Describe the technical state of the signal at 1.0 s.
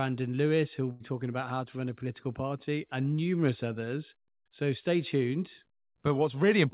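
At 1.0 s you're inside a burst of packet loss running from 0.92 to 1.03 s. About 80 ms of speech never arrived, so the receiver stretched the last sound it had and let it fade, then jumped ahead with that stretch of speech simply gone.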